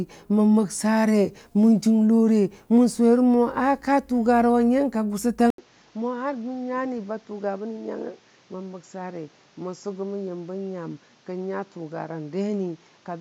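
At 5.50 s the speech drops out for 80 ms, then returns duller, about 10 dB quieter, with nothing above 7.6 kHz and new background noise roughly 30 dB below it. The likely cause is an input switched to a poorer device, which continues to the end.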